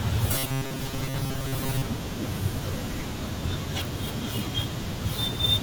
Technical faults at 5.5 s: none

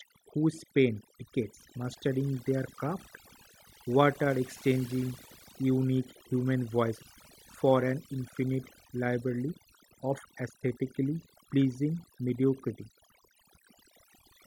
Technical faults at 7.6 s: overdone noise removal

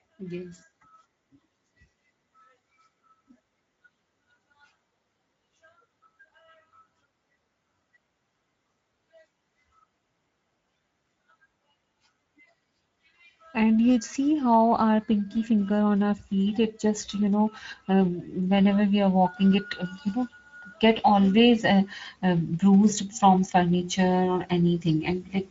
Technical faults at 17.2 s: Speex codec

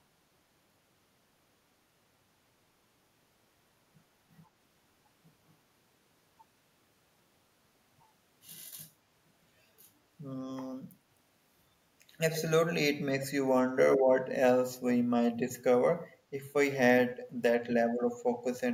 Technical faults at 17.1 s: echo leak

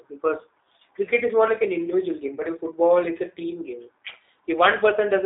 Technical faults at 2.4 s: G.729 codec; VoIP packet loss concealed by the speech codec

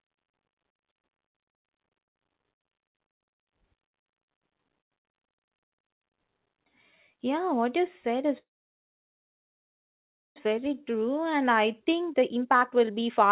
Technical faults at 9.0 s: call audio freeze

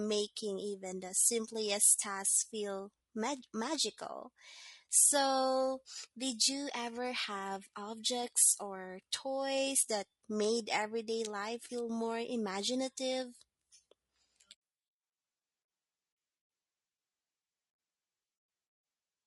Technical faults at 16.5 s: low-delay AAC compression

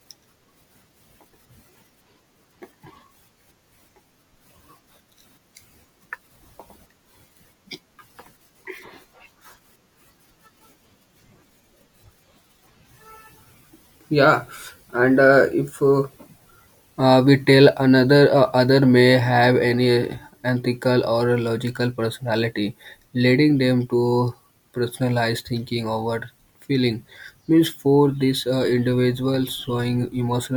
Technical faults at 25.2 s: none

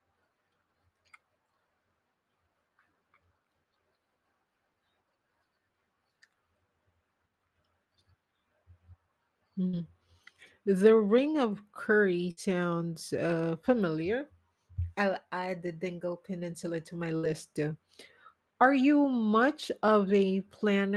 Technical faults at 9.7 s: burst of packet loss

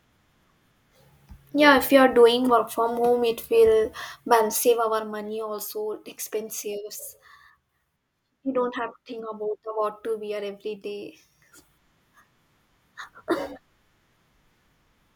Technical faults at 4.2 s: zipper noise

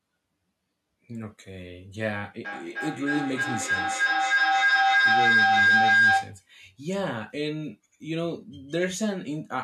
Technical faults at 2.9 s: feedback howl

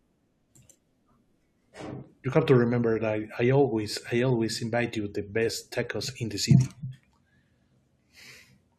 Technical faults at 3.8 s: none

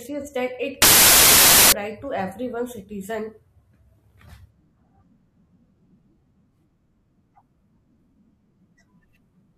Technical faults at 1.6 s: samples built from the wrong bytes

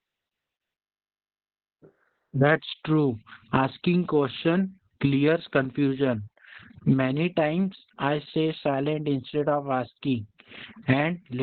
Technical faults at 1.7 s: Opus voice compression

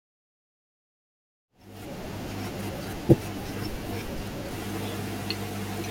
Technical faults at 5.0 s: none

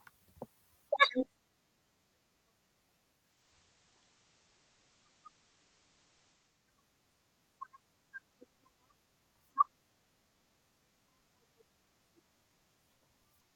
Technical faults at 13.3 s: none

